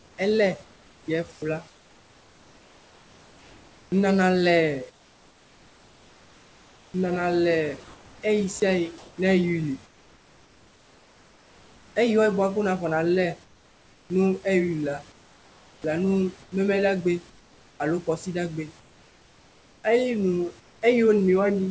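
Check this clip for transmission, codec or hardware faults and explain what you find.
The clip has three faults: noise suppressor artifacts throughout, repeated comfort noise in place of the background, and one short dropout from the voice detector.

Noise suppressor artifacts run through the whole clip. The suppressor cuts bands it judges to be steady noise, frame by frame, by about 17 dB. The background drops in the pauses and returns under the speech.

Comfort noise in place of the background appears at 0.00–3.92 s, 4.90–6.94 s, 7.84–11.96 s, 13.44–14.10 s, 15.12–17.80 s and 18.80–20.82 s. The real room sound gives way to a flat, featureless hiss. At 4.90 s and 13.44 s it falls about 4 and 5 dB. The likely cause is discontinuous transmission with synthetic noise filling pauses.

Sound dropped by the voice detector occurs at 8.60 s. About 10 ms of sound is lost and replaced by steady noise. 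The detector likely misjudged that sound as background and stopped sending briefly.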